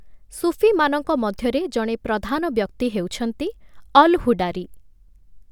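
No technical faults can be heard anywhere in the speech recording, with the signal running steady and intact throughout.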